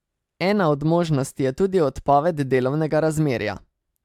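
No faults can be heard anywhere in the recording.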